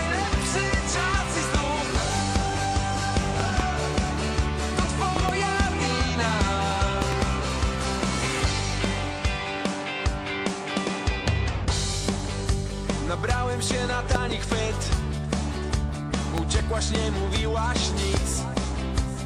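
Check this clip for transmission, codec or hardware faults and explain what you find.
One hardware fault appears: loud pops. Double pops occur at 3.40–3.62, 5.16–5.31, 7.02–7.14, 14.15–14.34 and 16.38–16.62 s, and a single pop at 18.14–18.17 s. Each peaks about 15 dB above the signal, with the sound continuing underneath. The likely cause is a voltage transient from a plug, switch, static or driver glitch.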